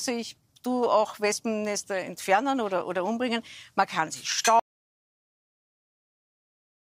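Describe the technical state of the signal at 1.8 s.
At 1.8 s the signal is intact, with no audible dropout, distortion, or other technical fault at that point.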